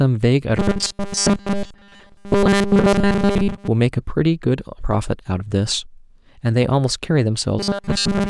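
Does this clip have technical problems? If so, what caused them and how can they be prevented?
Yes. At 0.57–3.68 s and from 7.59 s to the end, the speech becomes a rigid 200 Hz metallic buzz. This is robotic sound from repeated short buffers, likely from audio arriving too seldom, so a 5 ms chunk loops over most of the signal. Larger buffers or steadier delivery prevent it.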